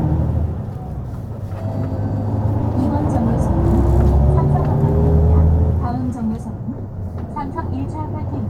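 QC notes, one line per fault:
1.32 s, corrupt frame decoded: a faint, brief blip from a single damaged compressed frame that the decoder played anyway, its misread codes putting stray energy at the wrong frequencies.
2.59–2.62 s, corrupt frame decoded: a loud, sharp squeak, around -5 dBFS, spanning a few bad frames.
7.58–7.66 s, corrupt frame decoded: a longer chirping burst of noise, moderately loud, as roughly seven consecutive frames decode with wrong gains.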